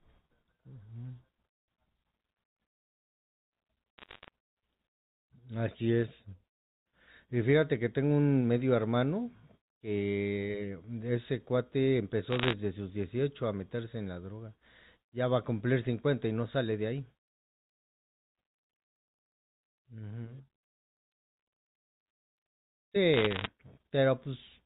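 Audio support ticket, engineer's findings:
Bit errors on digital phone line: bursts of sharp ticks and crackle at 3.98–4.28 s, 12.31–12.53 s and 23.14–23.46 s, error rate about 0.7–1.0 percent. Flipped sign or high bits in G.711 mu-law samples corrupt individual samples. Band-limited telephone coding beneath sounds clean.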